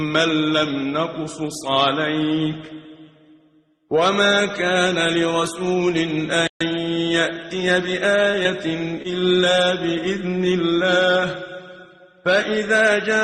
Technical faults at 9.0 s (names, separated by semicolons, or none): short concealed packet loss